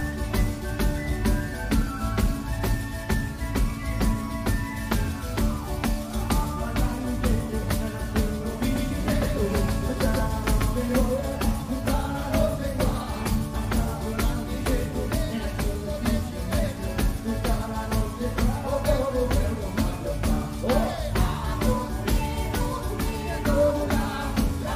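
From 8.7 s to 11.0 s the sound is doubled: a second full-band copy trails the original by roughly 150 ms, about 5 dB quieter, with no decay or room colour, and it switches on and off abruptly at both ends. The likely cause is the audio being captured a second time through a slower path. On a waveform, each transient shows a smaller twin shortly after it. A spectrogram shows every onset repeated at a fixed offset, starting and stopping with hard edges.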